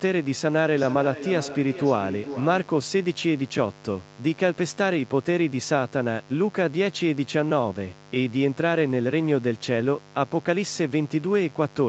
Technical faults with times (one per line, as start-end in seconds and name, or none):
0.00-11.88 mains buzz
0.75-2.80 feedback echo between two devices